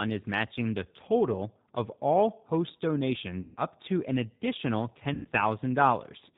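Throughout, the speech sounds plainly rough and synthetic, with nothing above 4 kHz, which fits G.729A coding at 8 kbit/s rebuilding the voice from a filter, pitch predictor and pulses.

From 3.41 to 3.57 s, just before "up to an additional", and again from 5.14 to 5.27 s, just after "up to an additional", the sound stretches into a buzzy tone or coloured noise that fades. This is VoIP packet loss concealed by the speech codec: about 150 ms and 110 ms of packets went missing, so the decoder extrapolated from its last pitch and filter at falling gain, and the voice stays weakened briefly afterwards.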